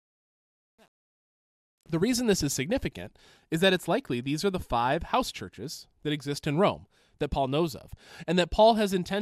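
From the start to 2.2 s, the speech fades in with truncation distortion on the fade. The fade-in itself ends at 2.21 s. However, the gain stage rounds each sample to a coarse grid without dither, and the graininess points to roughly 9 bits of resolution. Through the quietest part, 0.0 to 1.8 s, the waveform collapses into a few square steps, so the sound turns gritty.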